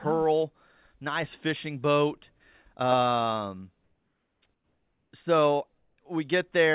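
From 3.84 to 4.42 s, and again from 4.54 to 5.12 s, the background between speech turns into comfort noise. It is steady and featureless, and about 2 dB quieter than the real background. A shorter stretch from 5.78 to 5.98 s drops about 3 dB. The likely cause is discontinuous transmission: the sender went silent in the pauses, and the receiver filled them with synthetic noise. The call band stops at 4 kHz, so the fill is dull too.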